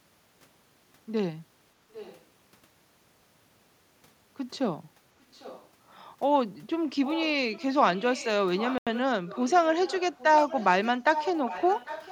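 From 1.92 to 2.24 s and 5.21 to 5.69 s, a faint copy of the speech returns 800 ms late, likely an echo leak from a far-end speakerphone. It grows louder from 7.04 to 9.51 s and 9.84 s to the end. At 8.78 s, an 86 ms dropout to silence points to a likely Bluetooth stall.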